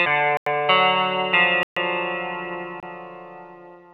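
At 0.37 s the audio drops into a block of digital silence for about 93 ms, which fits a 4096-sample buffer the program didn't fill in time. It happens again at 1.63 s for about 134 ms, and at 2.80 s for about 26 ms. Each time the signal cuts out and back with no fade. All three gaps come across as short holes.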